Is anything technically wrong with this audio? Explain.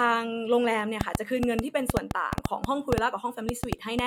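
Yes, there is a train of clicks from 1.01 s to 4.00 s. Short pulses of much the same shape break into the speech at an uneven pace, averaging about 5.4 per second, for around fifteen clicks in all. The likely cause is interference from nearby equipment or a faulty connection or power supply. The clicks are heard as sharp ticking over the speech and in its pauses, peaking about 20 dB above the speech.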